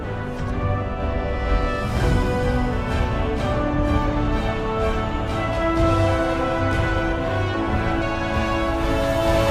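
Compressed frames skipped at 8.02 s: about ten 32 ms frames never reached playback, so the sound jumps ahead roughly 300 ms.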